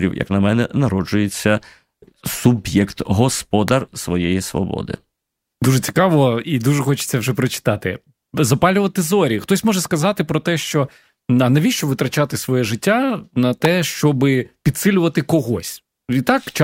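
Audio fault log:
3.68 s and 13.65 s: electrical switching spike, a sharp snap, likely from a nearby switch arcing; the speech runs on unbroken beneath, unlike a dropout click.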